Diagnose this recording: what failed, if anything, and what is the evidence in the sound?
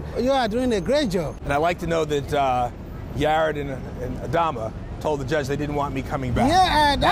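Nothing failed; no fault is audible anywhere here.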